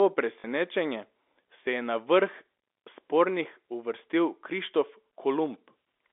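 A brief robotic stutter at 0.40 to 0.44 s with a buzz near 50 Hz. This is packet loss with last packet repeated: 40 ms went missing, which fits two 20 ms packets, and the receiver replayed the last one over the G.711 telephone-band audio.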